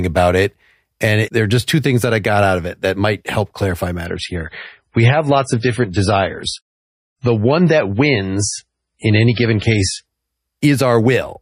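Speech, where an adaptive stream drops to a lower bitrate from 4.06 s to 10.06 s. Nothing remains above 10.5 kHz and artefacts thicken, which fits a fall to around 24 kbit/s MP3. Unlike a dropout, there is no gap, only an abrupt switch in quality.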